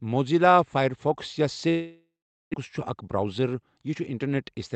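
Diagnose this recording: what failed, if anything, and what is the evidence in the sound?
The network failed first. Speech stops at 1.69 s and returns at 2.56 s. This is a long network dropout, likely caused by packets stalling in transit. The receiver fills the gap by carrying the last sound forward as a buzz that fades away. It then leaves near silence for about 0.44 s. Roughly 0.76 s of speech is never heard. The gap also builds up extra delay, around 70 ms, in the receive path.

The jitter buffer reacts next. From 2.89 s to 3.63 s the speech runs about 8% fast at unchanged pitch, and it sounds hurried. This is a jitter buffer speed-up. The buffer is holding more audio than its target, because delayed packets arrived together after the dropout. It cuts short pitch-period pieces many times in a row. In total it removes roughly 70 ms, which clears that backlog. This is a buffer-stage fault.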